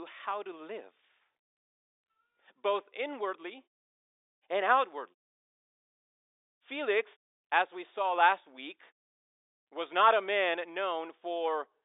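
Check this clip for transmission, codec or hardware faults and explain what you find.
No faults to report in this speech recording.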